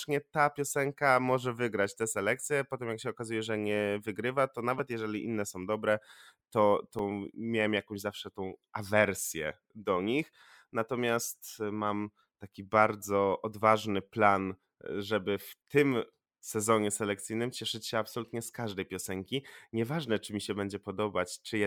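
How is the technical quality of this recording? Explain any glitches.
Two brief glitches mar the speech. At 4.79 s and 6.99 s there are tiny clicks or buzzes from a repeated buffer: a 5 ms chunk replayed twice, then once, when fresh audio arrived late.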